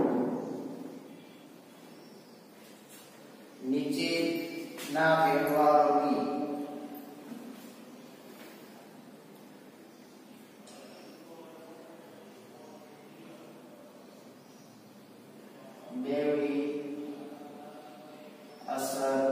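No technical faults are audible.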